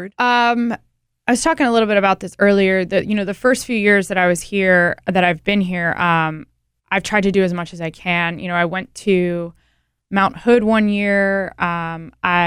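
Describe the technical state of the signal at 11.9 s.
At 11.9 s the speech signal is intact, with no audible fault.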